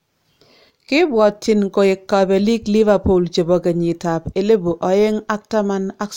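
At about 0.70 s the speech suddenly gets quieter, falling by about 6 dB, and it stays down right to the end of the clip. That abrupt, lasting step is what you'd expect when one channel drops out: with one side of the stereo pair likely lost, the mono sum only carries half the shared signal, so the level halves in amplitude, and the sound is otherwise unchanged.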